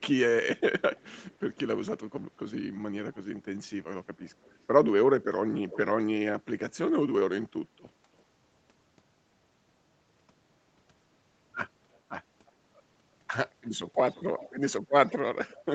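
Speech with an echo leak: a delayed copy of the voice trails it by about a third of a second (332 to 342 ms) at 0.57–1.96, 4.19–4.66, 5.68–5.78, 11.93–11.98 and 13.64–15.74 s. It is very quiet at first, stronger near 5.7 s and in the final stretch. This is likely a far-end echo canceller letting loudspeaker pickup through. On a spectrogram, which stops at 8 kHz, the echo appears as fainter, time-shifted copies of the speech harmonics.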